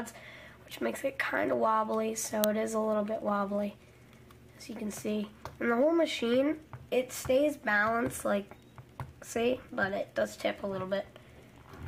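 At 2.44 s there is a single sharp, loud crack of digital noise. This is an uninitialised buffer. A block of audio was sent to the output before any samples had been written into it. Whatever data sat in that memory was played as if it were sound. The burst lasts well under a millisecond, about 0.67 ms, which fits a 32-sample buffer. It reads as a brief, harsh click rather than a sustained noise.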